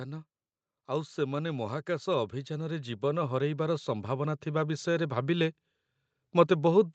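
From 0.85 s to 5.59 s the speech and its background noise swell together, growing steadily louder by about 12 dB. This is automatic gain rising: the gain control judged the input too quiet and slowly raised its gain. The call band stops near 8 kHz.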